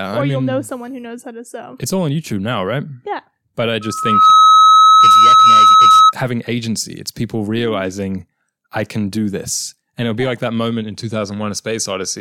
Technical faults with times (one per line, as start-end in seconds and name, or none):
3.81-6.13 loudspeaker feedback squeal